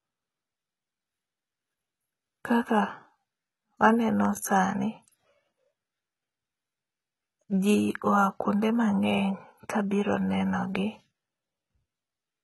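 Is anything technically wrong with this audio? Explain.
Yes. Throughout, the s sounds come out gritty and lispy and the treble has a metallic sheen, with nothing above about 11.8 kHz. The likely cause is heavy HE-AAC compression, fitting a bitrate around 16 kbps: the treble is copied up from lower bands, so its harmonics misalign.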